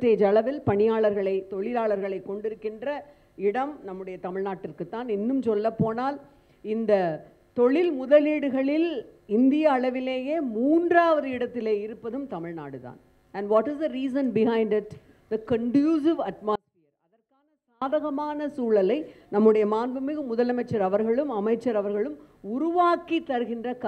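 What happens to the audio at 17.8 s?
At 17.8 s the sound snaps back from an audio dropout to a faint residue lasting from 16.56 s, about 1.26 s. The signal was likely lost upstream while the path stayed live, leaving only a faint leak some 40 dB down. Waveform and spectrogram show an abrupt, nearly empty gap with sharp vertical edges.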